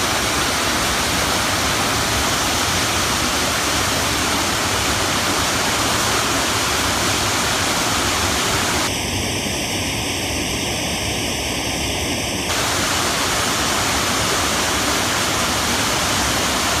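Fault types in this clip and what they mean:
Channel delay (comb filtering): one channel arrives a fraction of a millisecond late, and when the pair is folded to mono the shared content cancels at evenly spaced frequencies starting near 1.5 kHz, so from 8.87 to 12.49 s the sound turns hollow and phasey.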